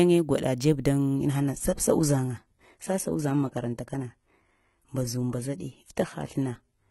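From 1.15 s to the end, the speech drops abruptly to a lower-bitrate adaptive stream, with no gap unlike a dropout: treble above 11.8 kHz vanishes.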